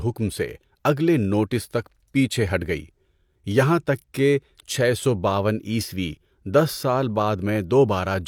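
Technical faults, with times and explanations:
Nothing in this speech recording stands out as a technical problem; it just sounds the way it should all the way through.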